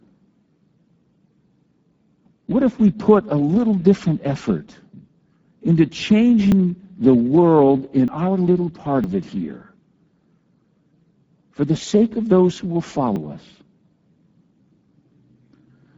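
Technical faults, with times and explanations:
Throughout: Speex codec. The speech carries plainly audible CELP damage at around 9.8 kbps, sounding noisy and hoarse because the excitation gets too few bits. A spectrogram shows smeared, noise-like texture replacing clean harmonics above 8 kHz.
6.52, 8.08, 9.04 and 13.16 s: dropped buffer (overrun). Each is a sudden jump in the sound with no gap. About a tenth of a second goes at 6.52 s, just before "the world". Shorter skips of roughly 40 ms come at 8.08 s, between "the world" and "our little part of", at 9.04 s, and at 13.16 s after "of those who will". The likely cause is the program failing to collect samples before the hardware overwrote them, so the two sides were spliced directly. The waveform shows an abrupt discontinuity. The spectrogram shows a thin vertical broadband line with the formant pattern shifting across it.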